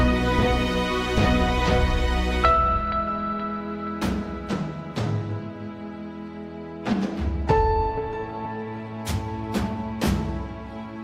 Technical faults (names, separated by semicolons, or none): none